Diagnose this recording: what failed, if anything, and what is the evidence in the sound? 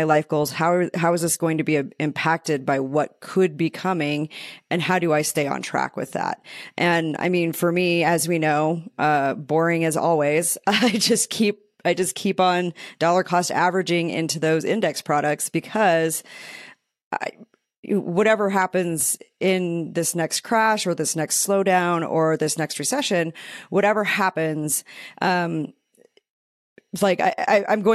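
Nothing seems to have gone wrong anywhere along the chain here; I listened closely and found no fault to diagnose in this speech recording.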